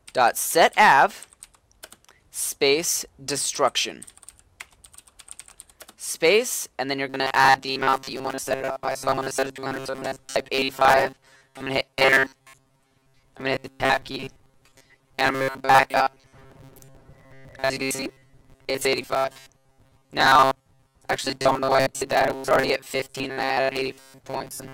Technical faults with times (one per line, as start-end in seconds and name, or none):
7.09-24.73 robotic sound from repeated short buffers